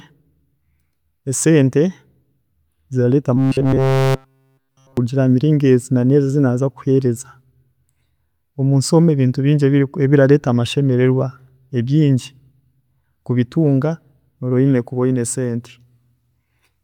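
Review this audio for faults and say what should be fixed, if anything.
Robotic sound from repeated short buffers at 3.37 to 4.97 s, just before "hamiringo ezi na neezi": a stiff metallic 133 Hz buzz, likely from a 7.5 ms chunk looping throughout. A deeper buffer with a steadier feed would stop it.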